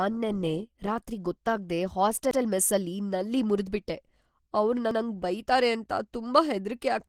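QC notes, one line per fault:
throughout: Opus compression, likely. The speech sounds muffled and hoarse, with grainy, rough texture where the codec fills bands with noise rather than leaving holes. This fits Opus in hybrid mode at about 16 kbps. Content still extends to about 20.2 kHz.
2.31–2.41 s and 4.91–5.01 s: overlapping chunks. At each join, 100 ms of audio plays twice, heard as a brief click or stutter. The regular spacing fits 2.5 s processing chunks, each starting 100 ms before the previous one ended.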